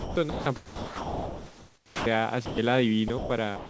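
Speech keeps giving way to a soft, steady hiss at 0.00–0.16, 0.30–0.46, 0.56–2.06, 2.46–2.58, 3.08–3.10, 3.18–3.30 and 3.56–3.69 s. That's likely sound dropped by the voice detector: the sender judged quiet stretches as background, stopped transmitting, and the receiver filled in comfort noise. The long gap around 0.6–2.1 s swallows close to a second of real sound. All of this sits over a band-limited call path with nothing above 8 kHz.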